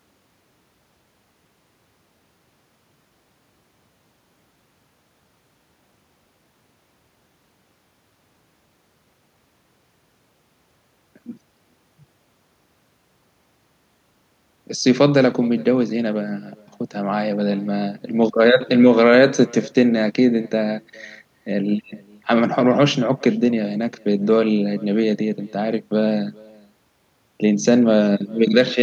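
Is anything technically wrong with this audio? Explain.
Yes. Throughout the speech there is echo with no canceller. The far end's loudspeaker feeds its microphone, and nothing removes it. Each phrase returns about 27 dB quieter, roughly 0.4 s later. It sounds like a faint, thin shadow trailing the talker.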